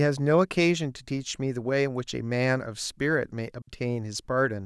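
At 3.62 s the speech drops into a clean 60 ms hole of near silence, a digital wireless dropout: the receiver lost too much data and muted, with no noise burst either side.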